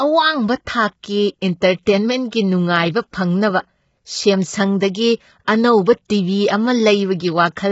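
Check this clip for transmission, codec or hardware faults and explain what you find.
Two codec faults stand out in this speech clip, one running the whole way through and one brief.

Throughout, the voice is rough and grainy, with noise filling the gaps between harmonics and nothing above 7.7 kHz. That's likely low-delay AAC compression, whose short frames resolve pitch poorly and spend bits fast. The heavy damage points to a low bitrate, around 16 kbps.

At 1.03 s there's pre-echo. A sharp attack lands late in a transform block, so the quantisation noise meant for the loud part also spreads over the quiet 10 ms before it. You hear a short hiss just ahead of a softened, smeared onset.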